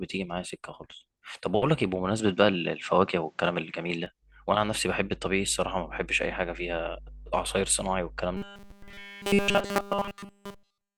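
Speech, with two faults. From 2.20 to 4.06 s the sound turns dull and narrow, with a level shift of a few dB and a faint new noise floor well below the voice, most likely an input switched to a poorer device. On a spectrogram the upper band is abruptly empty, with no gap at the switch. From 8.37 s to the end the voice becomes a rigid metallic buzz at 200 Hz, robotic sound from repeated short buffers, likely caused by a 5 ms chunk being replayed while all new audio is lost. The waveform shows one identical short cycle tiling over and over, and the spectrogram shows evenly spaced harmonic lines at multiples of 200 Hz.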